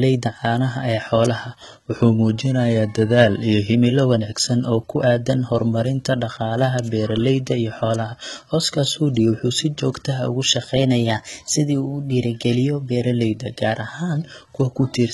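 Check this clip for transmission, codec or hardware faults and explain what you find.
Two faults are present: codec damage throughout the speech and two speed steps.

Throughout, heavy artefacts with nothing above 11.8 kHz are likely from HE-AAC compression, consistent with about 16 kbps. Replicated treble makes s sounds gritty and metallic.

From 1.96 to 3.74 s, just before "wanaagsan oo ku aaddan", and from 10.78 to 13.00 s, a drift correction step is the likely cause. Playback shifts 5.6% slower and a semitone flat, then 5.6% faster and about 95 cents sharp.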